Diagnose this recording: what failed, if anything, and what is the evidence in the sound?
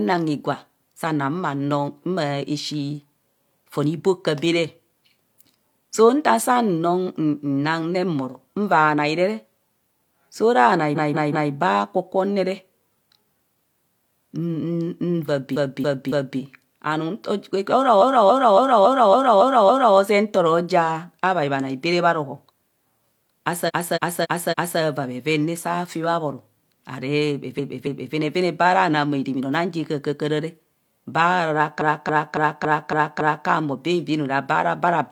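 Repeated frames in the compressed stream: a block of frames was decoded several times over, so the speech stutters at 10.92, 15.51, 17.98 (before "zee nto"), 23.64 (before "vaa bheven"), 27.54 and 31.77 s. Each loop replays 0.19 or 0.28 s, adding up to 6.69 s.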